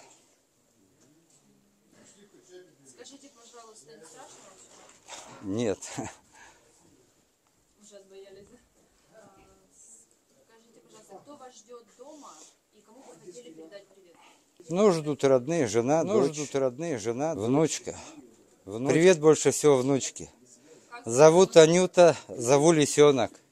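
From 14.60 to 19.04 s, a doubled audio track appears. A second copy of the same sound runs about one and a half seconds behind the first. It sits about 5 dB below the original and covers the full frequency range. It has no decay and no added room sound, so it reads as a clean repeat. Both its entry and its exit are abrupt. The likely cause is a second capture through a slower path.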